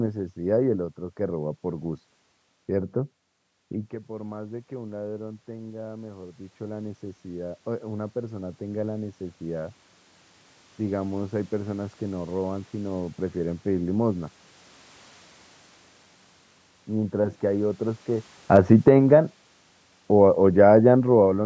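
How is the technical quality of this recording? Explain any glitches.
The recording has automatic gain control problems, with the level pumping in two places.

Automatic gain rising, 3.72 to 9.81 s: after the talker moves away at around 3.5 s, the input drops by about 15 dB. The gain control slowly adds about 11 dB, so voice and room noise swell together over six seconds without fully recovering the level.

Automatic gain falling, 18.4 to 19.1 s: when the talker moves again at around 18.5 s, the control cuts about 5 dB. The sound sinks along with its background. Automatic gain rising follows at 19.01 to 19.42 s, adding back about 3 dB, so the level briefly bobs. The call microphone processing stops at 8 kHz.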